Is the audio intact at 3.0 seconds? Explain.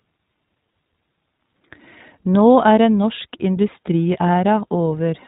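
No. At 3.0 s the speech carries iLBC codec damage, and that damage runs through the whole clip rather than appearing at a single moment. The codec is narrowband, so nothing above 4 kHz survives, and the sound is dull and boxy. Each short frame's excitation is coded on its own, which fits 20 ms frames at about the 15.2 kbps rate, and this leaves a plainly audible rough, synthetic grain on the speech.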